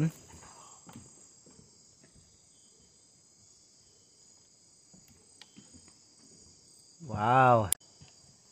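Near the end, at 7.69 s, a short burst of garbled sound cuts in and lasts about 0.12 s, to 7.81 s. It comes across as a brief squawk or blip that breaks the flow of the audio. This is damaged data in the compressed stream. Some bytes in that stretch were wrong or missing. The decoder could not read those frames correctly and lost sync. It then hunted for the next valid frame header before clean playback resumed.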